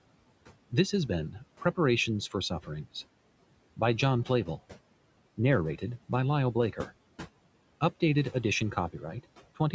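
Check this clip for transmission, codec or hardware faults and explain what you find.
One fault runs through the whole clip, coming from processing rather than transmission or hardware.

Noise suppressor artifacts, throughout: frame by frame, bands judged to be steady noise are lowered by about 18 dB, so the room noise sinks between words and returns beneath them.

That room noise sits about 19 dB below the speech, and the call microphone processing leaves nothing above 8 kHz.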